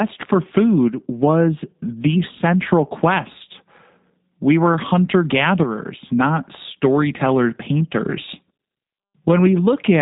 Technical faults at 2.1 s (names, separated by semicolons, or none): G.729 codec